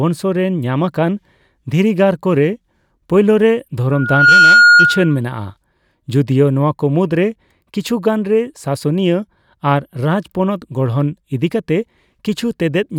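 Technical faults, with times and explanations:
3.91–5.19 s, loudspeaker feedback squeal: a pure tone near 1.4 kHz swells over just under half a second to roughly 10 dB above the speech, because the microphone picks up its own loudspeaker and the loop's gain at that frequency exceeds one.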